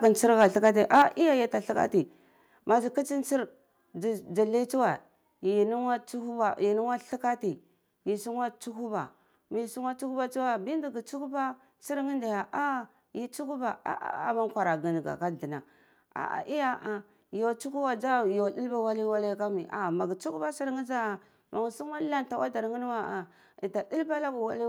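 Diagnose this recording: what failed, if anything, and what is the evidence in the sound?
Converter stage: microphone overload. Peaks clip at 0.04 to 0.08 s and again from 0.4 to 1.02 s, about 3 dB and about 5 dB over full scale. The loudest moments turn harsh and crackly. The likely cause is input gain set too high, flattening waveform tops.

Call processing stage: microphone volume stepped down. At 1.02 s the whole signal, background included, drops by about 5 dB in one step, right after the distorted stretch. The call software likely detected the clipping and cut the device's input volume.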